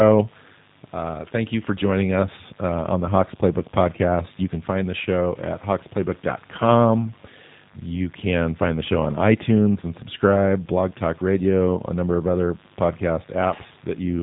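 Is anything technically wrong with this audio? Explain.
Yes. The speech carries G.729 codec damage from start to finish, and it is plainly audible. The codec, here the lighter G.729A variant, rebuilds each 10 ms frame from a vocal tract filter, a pitch predictor and a few pulses. The result sounds rough and slightly synthetic. Nothing above 4 kHz survives, so the audio is dull and muffled. The coarseness suggests a budget of about 8 kbit/s.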